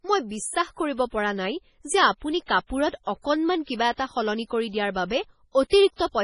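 MP3 compression artefacts run through the whole speech clip, likely from a low-bitrate MP3 encode. Nothing is left above 10.6 kHz, and weak frequency lines flicker on and off between frames, giving heavy watery, swirly coloration that fits a bitrate around 24 kbps.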